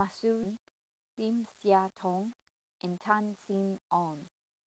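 Throughout the speech, the signal was likely reduced to low bit depth without dither, rounded to what sounds like 7 bits, leaving an error that tracks the signal at roughly 30 dB below it. Quiet stretches turn gritty and grainy, the roughness shifting as the speech moves.

From 2.43 to 3.51 s, a jitter buffer speed-up trims around 70 ms of excess buffered audio by cutting repeated pitch-period-sized slices. The speech runs about 6% faster at unchanged pitch, sounding slightly hurried before settling back.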